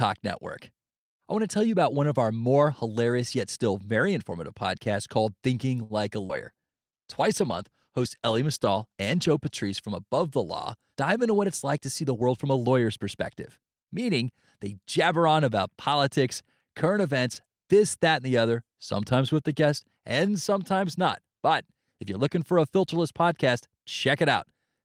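A speech recording with several network-call faults clustered in its first half. At 5.83 s a sound is briefly held too long, a stretched sustain with a slight buzz or dip lasting until about 5.93 s, before the speech carries on from exactly where it left off. This is a short stall from a late packet: the jitter buffer ran dry, so the receiver extended the last sound for 64 ms until the overdue audio arrived, adding that much delay but losing nothing. Just after, from 6.26 to 6.32 s, there is a brief smear or wobble in the speech. That is short concealed packet loss: about 60 ms of audio never reached the decoder in time, and the receiver covered the hole with roughly 35 ms of synthesised continuation of the preceding sound before blending back into real audio, which also pulled the delay back down by around 30 ms. Overlapping this, from 6.30 s to 9.88 s, the voice turns coarser and rougher, staying at its worst for close to 3 s before clearing. 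This is a call bitrate drop, where the call's bandwidth estimate fell and the encoder was told to spend far fewer bits, which fits a fall from about 32 kbps to about 18 kbps. Inside that stretch, between 6.52 and 6.68 s, the speech briefly drags, drawn out at unchanged pitch, running at about 78% speed. That is a jitter buffer slow-down: with its reserve running low, the receiver repeated single pitch periods over and over to rebuild a cushion, adding 44 ms. Later, from 12.03 to 12.55 s, between "it's like to see" and "lawyer's perspective meaning they", the delivery sounds hurried while the pitch stays put, at about 110% speed. This is a jitter buffer speed-up, the receiver holding more audio than its target and trimming short pitch-period pieces repeatedly to cut the backlog, removing roughly 70 ms in total.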